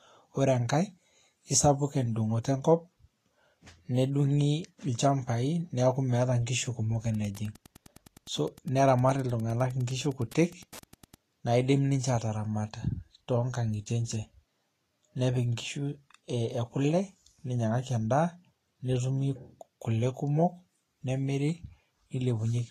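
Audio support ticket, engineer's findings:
Hiss and grain across the whole speech track, treble roughened, nothing above 14.2 kHz. Likely Vorbis compression at a low setting, consistent with roughly 35 kbps. Coarse high-band quantisation turns fine detail into noise. Damage plainly audible.

Steady ticking from 7.13 to 11.22 s, faint, well under the speech. Beacon-rate Wi-Fi interference, repeating every 102.4 ms, about ten ticks a second. A nearby radio's bursts are being rectified in the audio circuit.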